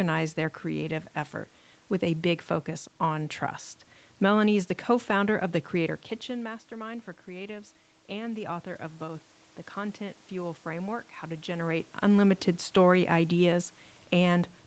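Around 6.0 s the talker drops back from the microphone and the input level falls by about 14 dB. Automatic gain rising follows: the gain control treats the quieter input as a level it should restore and lifts its gain by about 6 dB, gradually, from 6.26 s through to 11.74 s. Voice and room noise swell together across those five seconds, so the background rises along with the voice while the voice only partly recovers its earlier loudness.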